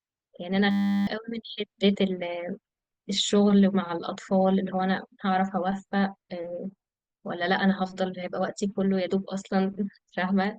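A speech recording with a system hang loop early on, from 0.71 to 1.07 s. The computer or audio driver seems to have frozen while the sound hardware kept replaying the same 10 ms chunk of its ring buffer, 36 times in a row. With a loop that short, the repeats fuse into a steady buzz at 100 Hz instead of a stutter, and roughly 0.4 s of the real audio is lost.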